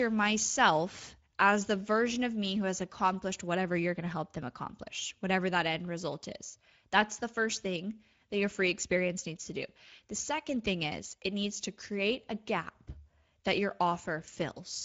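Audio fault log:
throughout: Speex codec. The speech sounds hoarse and noisy, with the band above 4 kHz only a shaped, hiss-like fill; this fits a middle Speex setting of about 17 kbps. A spectrogram shows smeared harmonics and nothing above 7.7 kHz.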